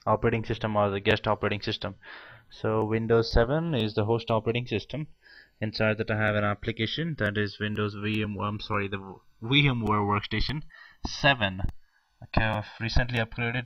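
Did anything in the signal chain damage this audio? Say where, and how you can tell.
Yes: channels drifting apart at the converter stage. Two unsynchronised clocks, around 100 ppm apart, let the inter-channel delay creep to roughly 1.5 ms, sweeping slow flanging, unlike a fixed offset's static comb.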